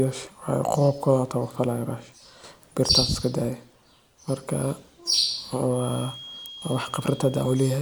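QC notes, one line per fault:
6.46 s, bit error spike. One sharp tick cuts through the speech, peaking at about -13 dBFS. A flipped bit threw a sample or two far off value, which snapped straight back. The jump is too brief and abrupt to follow the signal, so it sounds broadband.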